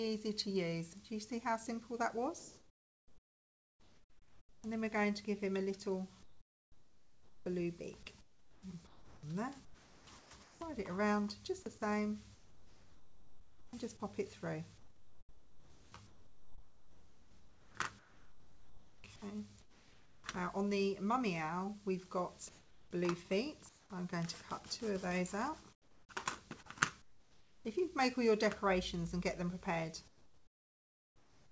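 Comfort noise in place of the background appears at 2.39 to 4.64 s, 6.23 to 10.61 s, 12.35 to 13.73 s, 14.78 to 20.24 s, 22.49 to 23.90 s, 25.73 to 26.09 s, 27.02 to 27.65 s and 30.08 to 31.52 s. In these gaps the real background gives way to a smoother synthetic hiss. The likely cause is discontinuous transmission: the sender goes quiet when its detector hears no activity, and the receiver generates shaped noise to fill the gap. In five of these stretches the fill is about 4 to 12 dB quieter than the true background. The longer spans mix patches of synthetic noise with real sound. The G.722 call path leaves no content above 8 kHz throughout.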